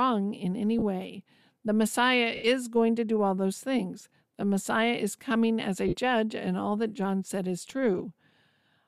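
Lost LE Audio frames break the speech at 0.79–0.83 s after "in any", 2.35–2.44 s, 5.88–5.95 s between "is coming as a" and "and all that", and 7.98–8.00 s after "said is". In each gap the decoder repeats the last spectrum with scrambled phase, producing a brief noisy smear. The 90 ms gap fades as concealment gives up. The gaps run 20 to 90 ms in 10 ms steps, which fits the frame length of likely LC3 coding.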